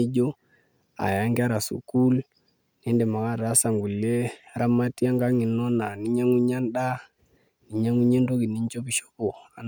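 No technical faults can be heard anywhere in the speech recording. There is nothing that needs a time marker.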